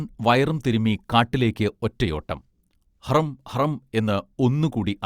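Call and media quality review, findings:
No faults found in this speech clip. Nothing to log.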